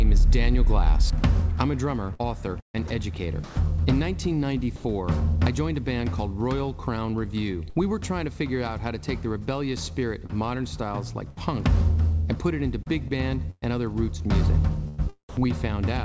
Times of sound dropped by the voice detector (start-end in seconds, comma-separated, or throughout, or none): 3.44-3.56, 4.76-4.84